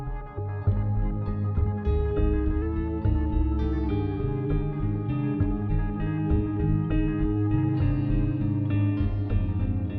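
From 2.62 to 3.88 s, likely a drift correction step: the sound plays 5.37% fast and 90.6 cents sharp, then snaps back. On a spectrogram, the harmonics step up, then drop.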